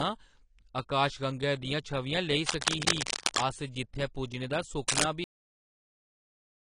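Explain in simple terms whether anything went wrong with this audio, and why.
Several things went wrong. The speech sounds dull and smeared from start to finish, with nothing above about 10.1 kHz. That is the plainly audible mark of AAC compression, which is the likely cause. The encoder kept too little detail, so the crisp top end and fine texture are gone.

There are two bursts of rough scratching over the speech, from 2.43 to 3.45 s and from 4.88 to 5.04 s. This is cable scratch noise. It likely comes from a loose or worn connection being moved. The first burst is roughly as loud as the speech, and the second is louder than it.

At 5.24 s the speech stops abruptly, mid-sound, and silence follows until the end. This is a cut-off end. The last part of the recording was never saved, so the sound has no natural fade.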